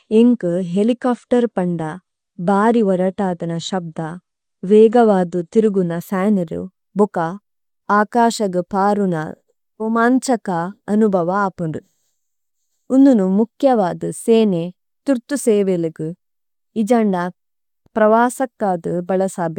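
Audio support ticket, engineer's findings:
Dull, band-limited speech 0 to 6.0 s, nothing above 10.1 kHz, heavier codec artefacts; abrupt clean step up, no gap. Adaptive stream starting at a low bitrate, fits roughly 32 kbit/s AAC before switching near 96 kbit/s.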